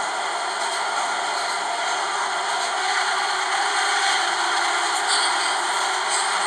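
There are no technical faults to describe in time order in this recording of sounds.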